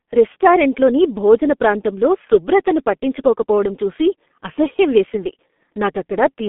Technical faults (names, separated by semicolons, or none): G.723.1 codec